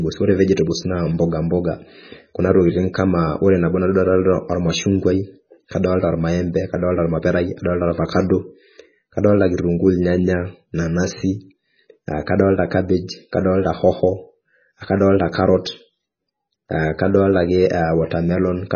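Speech throughout sounds watery and swirly, with nothing above 6.5 kHz, likely from heavy MP3 compression at a very low bitrate, around 16 kbps.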